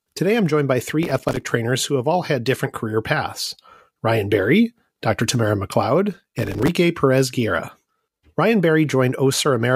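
Processor overload crackle at 1.03–1.50 s, after "I'm joined by", and 6.13–6.68 s: dozens of missed buffers of a few milliseconds leave tiny silent gaps, heard as gritty crackle.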